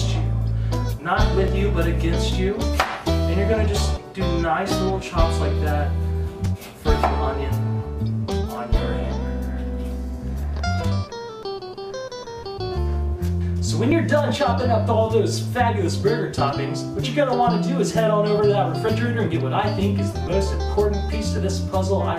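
Brief skips at 1.48, 8.94, 11.43, 13.92, 16.40 and 18.89 s, each dropping a tiny sliver of sound, are likely audio missing between chunks at 2.5-second boundaries. The edges join directly, without the silent gaps of ordinary dropouts.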